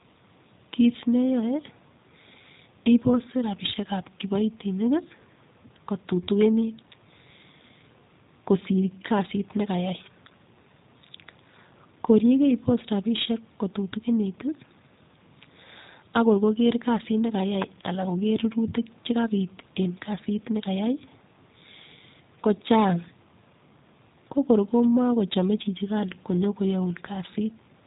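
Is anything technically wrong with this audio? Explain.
Yes. The speech has passed through a G.729 codec for its entire length. The encoder discards the waveform and sends only a vocal tract filter, a pitch predictor and a few pulses per 10 ms frame, and the decoder rebuilds the speech from those parameters. The rough, slightly synthetic texture this leaves is plainly audible, and nothing above 3.8 kHz survives, so sibilants sound dull. The overall thinness points to an 8 kbit/s stream.

There are also two electrical switching spikes, at 17.62 s and 24.84 s. Each is a sharp, very brief snap laid over the speech, lasting about 10 ms and 2 ms respectively. The likely cause is a nearby switch, motor or static discharge arcing, with the audio line picking up that burst of interference as a click added on top of the sound.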